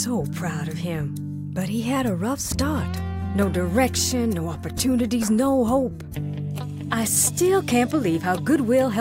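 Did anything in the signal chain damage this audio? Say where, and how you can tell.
No, nothing damaged it.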